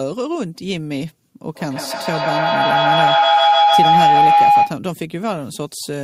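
At 1.43 s a feedback howl starts and runs to 4.82 s. A microphone is picking up a loudspeaker carrying the same call, and each trip around that loop comes back louder. The repeats grow instead of dying away. They narrow to a single tone near 700 Hz. The howl pulses about every 150 ms, the loop's delay. At its peak it sits about 10 dB above the speech. It stops when the loop is broken.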